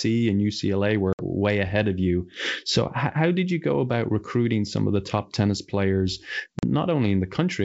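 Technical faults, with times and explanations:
1.13 to 1.22 s and 6.59 to 6.63 s, packet loss on an ADPCM call: about 60 ms and then 40 ms of the speech drop to flat digital silence, each gap cut with hard edges, as if several packets in a row went missing. On a spectrogram these show as clean vertical blank bands across the full wideband range; the waveform goes flat. When the sound resumes, the ADPCM decoder's predictor and step size no longer match the sender's, so it comes back slightly distorted, settling within some tens of milliseconds. The underlying G.722 coding itself, which sounds like the full 64 kbit/s mode, carries the speech up to about 7 kHz around these holes.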